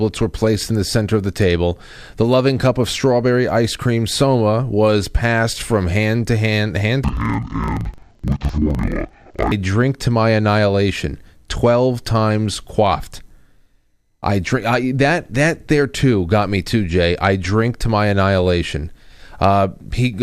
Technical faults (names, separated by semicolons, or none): interleaved audio read as planar